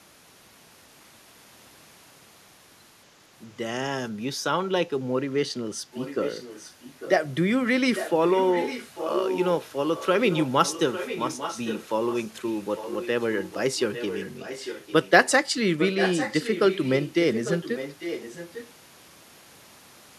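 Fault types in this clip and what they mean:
Echo leak: at 5.92–7.10, 7.95–9.46, 9.96–15.31 and 15.78–18.70 s, a copy of the speech returns 848 ms late, roughly 5 to 15 dB quieter, likely because a loudspeaker-side echo canceller let part of its microphone pickup back into the call.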